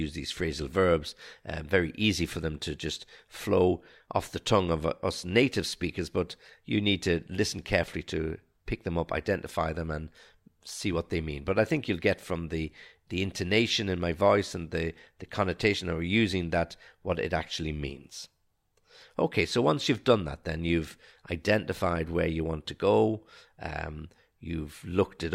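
No technical faults can be heard anywhere in the speech.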